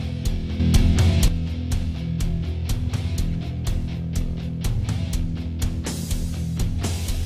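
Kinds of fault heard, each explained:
Sudden gain jump: from 0.60 s to 1.28 s the whole signal, background noise included, steps up by about 8 dB in an instant, then drops straight back. That's likely a digital gain change applied from one sample to the next with no ramp.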